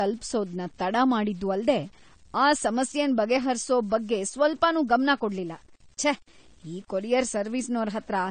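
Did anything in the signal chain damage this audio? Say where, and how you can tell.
Yes. Low bit depth without dither is audible throughout: quiet passages turn gritty, with grainy distortion riding on the speech, roughly 35 dB below it. At the sample-format conversion stage, samples were likely truncated undithered, which fits an 8-bit word length, so the error tracks the signal.

Low-bitrate audio saved at a high bitrate affects the whole clip too: nothing above 9 kHz, with the first encoding's artefacts still present. At the codec stage, this likely comes from a low-bitrate AAC encode, around 32 kbit/s, later re-saved as high-bitrate MP3, which cannot restore what was removed.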